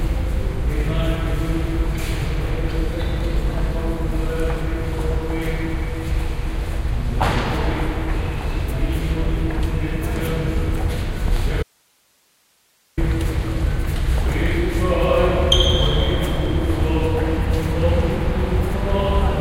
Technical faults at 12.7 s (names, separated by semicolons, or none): audio dropout to a faint residue